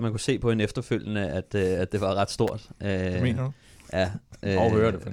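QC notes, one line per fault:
2.48 s, electrical switching spike: a sharp snap peaking near -15 dBFS right after "det var ret", likely a nearby switch arcing; speech continues unbroken beneath, unlike a dropout.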